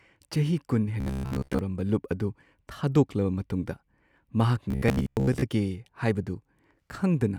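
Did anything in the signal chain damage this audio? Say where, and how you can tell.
Yes. From 1.00 to 1.60 s and from 4.71 to 5.42 s, the speech becomes a rigid, metallic buzz at 66.7 Hz. This is robotic sound from repeated short buffers. A buffer stage was likely starving, so 15 ms chunks replaced most of the real audio.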